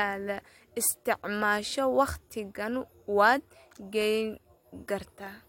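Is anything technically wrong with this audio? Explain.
No, nothing is technically wrong with this audio.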